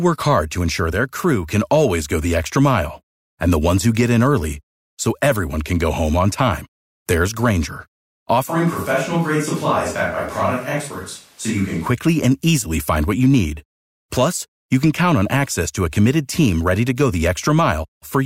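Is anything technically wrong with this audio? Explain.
Yes. A switch to a distant microphone runs from 8.49 to 11.86 s, starting just before "and easily find what". The close microphone's feed likely dropped out, leaving only a far pickup. The speech turns abruptly roomy, hollow and thinner in the bass, with room noise rising to roughly 30 dB below it, while loudness stays about the same.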